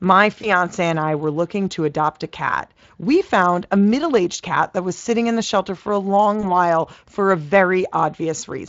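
VoIP packet loss concealed by the speech codec occurs at 0.41 s, before "and I were looking", and at 6.41 s, between "the shelter for a" and "while for a". Each time one 20 ms frame drops out. The Speex decoder stretches the previous pitch and filter at falling gain, leaving a brief buzzy or noisy smear that persists to about 0.49 s and 6.46 s.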